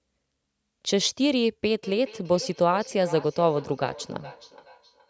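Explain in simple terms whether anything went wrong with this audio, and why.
Feedback echo between two devices from 1.83 s onward: a nearby device replays the sound into another microphone, so words return roughly every 0.4 seconds.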